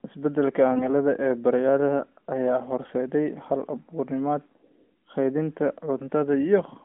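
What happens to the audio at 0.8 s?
From 0.72 to 0.93 s there's a burst of AMR bit errors: a few percent of frame bits flip, so the speech goes hoarse and gargly.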